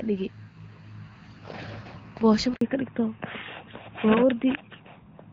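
At 2.55 s the speech quickly dies away and stays silent until 2.61 s, a 60 ms hole. This is a handover gap: while the call was passed from one network to another, no speech frames arrived, so that stretch is simply lost.

From 2.61 s to the end, the speech turns duller and rougher, with nothing above 4 kHz. This is a fallback to narrowband. The call drops from the clearer HD Voice sound of the first half, which fits AMR-WB at about 12.65 kbit/s, to an older narrowband codec, likely AMR-NB at 12.2 kbit/s.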